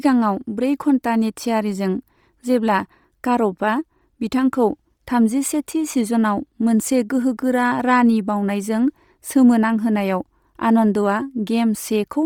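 Speech, carrying a breathy, grainy edge throughout, likely from Bluetooth LC3 compression at a rate fitting about 32 kbps. A spectrogram would show noise-filled upper bands in 10 ms blocks, empty above 20.3 kHz.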